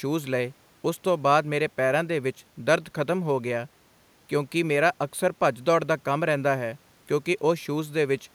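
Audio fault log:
No fault can be heard anywhere in this speech clip. Nothing in it calls for an entry in the log.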